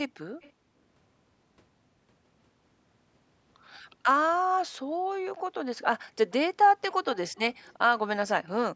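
A speech recording carrying two kinds of call-path fault. An echo leak shows up at 0.41 to 0.52 s and again at 7.35 to 7.74 s: a faint, delayed copy of the speech trails the original by roughly 345 to 348 ms, sitting far below the direct voice. On a spectrogram it appears as a weak ghost of the preceding speech harmonics, shifted right by about a third of a second, and on the waveform as low-level ripple after a louder burst. The likely cause is a far-end loudspeaker whose echo canceller let part of the sound its microphone picked up slip back into the call. The second fault is background gated by the echo canceller, at 0.53 to 0.83 s and at 6.7 to 6.84 s. During these stretches the room noise is abruptly pulled down, by about 34 dB in the first and about 40 dB in the second, as the canceller suppresses the microphone while playback is active, then releases it. A spectrogram shows these as near-empty vertical bands where the noise floor vanishes, and the waveform shows the background flattening to almost nothing before it returns. 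Across all of it the band stops at 8 kHz, from the call's microphone processing.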